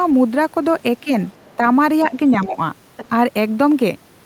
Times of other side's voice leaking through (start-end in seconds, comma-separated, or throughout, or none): 1.38-1.56, 2.34-2.46, 2.97-3.08